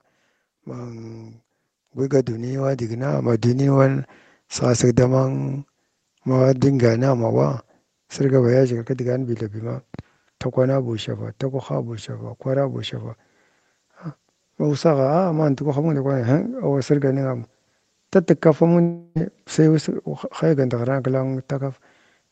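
A faint high whistle, roughly 35 dB below the speech, runs through the whole clip, wandering between about 13.1 and 13.5 kHz. This is switching supply whistle: a switching power supply operating in an audible burst mode or beating with another one, with its pitch shifting as the load changes.

From 0.51 to 3.86 s the automatic gain is rising. The level-control stage judged the input too quiet and raised its gain by about 14 dB over those three-odd seconds, so the speech and the background swell together.

From 18.81 to 19.17 s, just before "sai us", the audio stops. For about 0.34 s the receiver fills the gap by stretching the last sound into a fading buzz or hiss, and speech resumes with that stretch missing. This points to a long network dropout as the likely cause.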